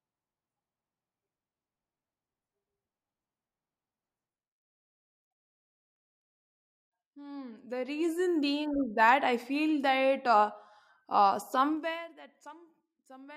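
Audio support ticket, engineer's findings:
Zipper noise, 7.34–8.34 s and 11.68–12.10 s (after "feel that uh uh"). Gain ramps, up about 15 dB then down about 20 dB, stepped around 40 times a second without smoothing. Each step clicks, giving a ticking buzz. Probable component: per-buffer gain stage.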